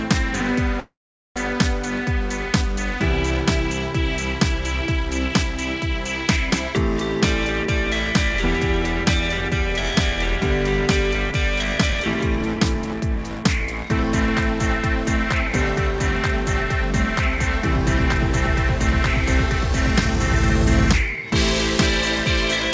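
At 0.80 s the audio stalls in what is likely a call audio freeze: the last sound carries on as a short fading buzz, then about 0.43 s of silence, and at 1.39 s it resumes from exactly where it stopped, so roughly 0.56 s of gap has been inserted and nothing is lost. That sets it apart from a packet-loss dropout, where sound is skipped rather than paused. Two later stretches show jitter buffer speed-up, the receiver trimming pitch-period-sized pieces to shrink built-up delay. From 7.64 to 10.42 s the audio runs about 3% fast, losing around a tenth of a second. From 11.15 to 14.04 s it runs 9% fast and sounds noticeably hurried, shedding roughly a third of a second. Because the pitch stays put, this is not a resampling or clock-speed error, which would raise pitch along with tempo. Throughout, nothing sits above 8 kHz, consistent with a wideband call codec such as G.722.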